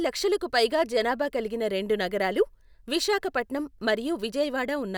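No technical faults are audible.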